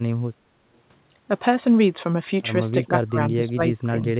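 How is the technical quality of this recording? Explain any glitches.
The speech has been pulled down in level twice near the end. Its band stops at 4 kHz, which fits narrowband G.711 mu-law at 64 kbps on the call path.

From 2.85 to 2.92 s the speech dips by roughly 10 dB. From 3.09 to 4.05 s it is ducked much harder, by around 25 dB, in broken stretches. This is speech suppressed in double talk, likely an echo canceller treating the talker as loudspeaker echo while the far side spoke. Unlike packet loss, the level sinks and recovers rather than leaving hard gaps or synthetic fills.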